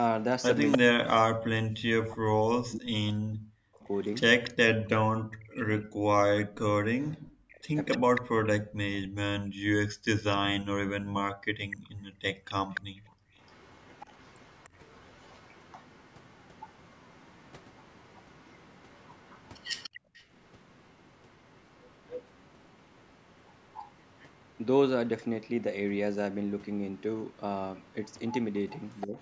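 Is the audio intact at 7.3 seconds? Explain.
No. Around 7.3 seconds the speech dips and breaks up, dropping by roughly 40 dB in places, as part of a stretch from 0.77 to 8.45 s. This is likely speech suppressed in double talk, where the echo canceller cannot tell this talker from the loudspeaker echo and turns both down.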